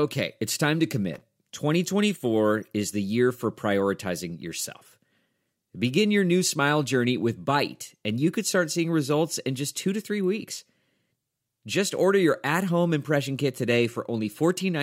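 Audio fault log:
1.14–1.21 s, loose connector crackle: just after "it's time to", a brief irregular scratchy burst. A worn contact briefly chops the speech signal open and shut.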